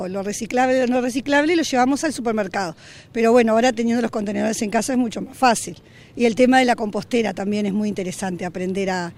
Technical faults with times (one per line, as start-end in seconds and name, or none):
0.96-8.93 periodic USB or driver dropouts